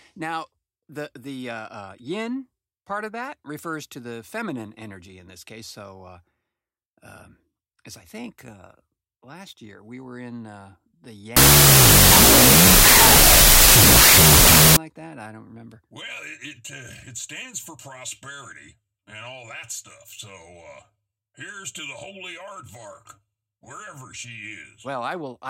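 Wrong sample width breaks this speech recording from 11.37 to 14.77 s, between "were in uh the" and "that I don't remember". Audio stored as 32-bit float is read as 16-bit integers, so each sample splits into two values. The half holding the mantissa bytes becomes harsh, loud noise, and the half holding sign and exponent bits carries only a distorted trace of the original. Doubling the sample count halves playback speed, so the buried sound drags at half speed, an octave low.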